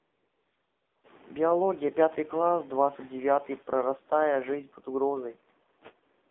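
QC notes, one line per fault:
Throughout, AMR narrowband mobile codec: the speech was coded by the AMR-NB phone codec at a low mode, with buzziness and synthetic edges that fit a rate around 7.4 kbps. Each 5 ms stretch is rebuilt from a vocal-tract model driven by a few pulses, so fine detail is replaced by a coarse imitation. The line passes only about 250 Hz to 3.6 kHz, leaving the sound thin and boxy, and the coding damage is plainly audible.
0.00–1.04 s and 6.30 s, AMR comfort noise: the phone treated the opening second as silence and sent no speech frames, so the receiver filled the gap with synthetic noise built from a rough sketch of level and spectrum. That opening sounds smooth and steady instead of like the real room. At about one second real frames resume and the room noise jumps up by roughly 20 dB, a clear switch. A brief comfort-noise fill at 6.30 s covers the very end.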